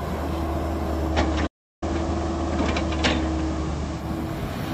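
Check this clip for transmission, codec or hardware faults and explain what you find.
Two faults are present: a digital-to-analogue radio blend and a playback stall.

From 1.06 s to 4.06 s, the receiver performs a digital radio blend to analogue FM, cross-fading over about 0.12 s each way. Hiss rises to roughly 20 dB below the signal, with no level jump. On a spectrogram, a noise floor fills the band.

From 1.46 s to 1.83 s, a playback stall cuts the output to silence for 350 ms, most likely because the player ran out of data. The waveform shows a flat gap, and the spectrogram shows a blank vertical band before the sound resumes.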